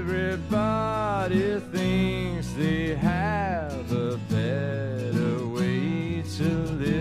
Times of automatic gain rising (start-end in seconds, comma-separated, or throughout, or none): none